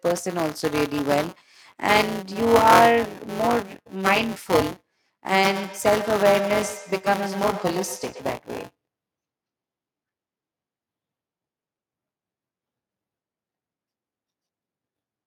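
Buffer tearing runs throughout: writer and reader pointers cross each period, splicing a small slice of stale audio in, giving a 188 Hz rattle that fits a 256-sample buffer. From 5.45 to 8.27 s, feedback echo between two devices returns the speech roughly every 100 ms, at about -11 dB, thinner and ringing each pass.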